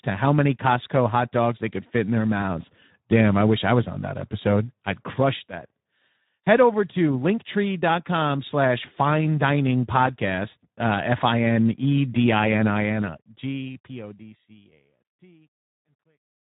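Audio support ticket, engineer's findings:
Hoarse, grainy speech for the full clip, with nothing above 3.8 kHz, so the top of the band is dull and missing. Component: Speex codec at a low-to-middle quality setting, consistent with roughly 11 kbps. Mechanism: the CELP excitation is starved of bits, so the voice's fine structure is replaced by coarse, noisy approximation. The damage is plainly audible.

Gritty decay on the closing fade-out, 12.74 s to 16.59 s. Worst from 14.74 s to the end. Component: truncation distortion on a fade, in an undithered gain stage. Mechanism: resolution fits about 12 bits, so the quiet end of the waveform collapses into a few square steps.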